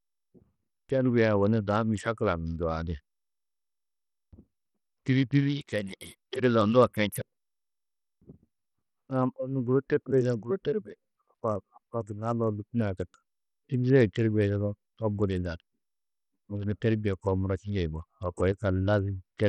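Across the whole speech clip the treble drops out and flickers, with a gritty quantisation noise and aliasing riding on the voice, likely from Bluetooth SBC compression. The heavy damage points to a small bit pool near 64 kbps, starving the upper sub-bands and coarsely quantising the rest.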